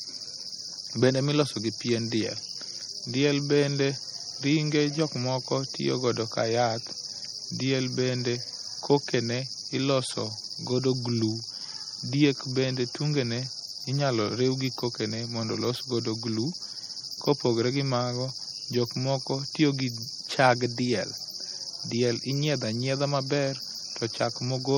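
MP3 compression artefacts run through the whole speech clip and are plainly audible. The sound is watery and swirly, with metallic chirps on s sounds and smeared attacks. Weak frequency lines are likely being zeroed and flickering frame to frame, which fits a low bitrate around 48 kbps.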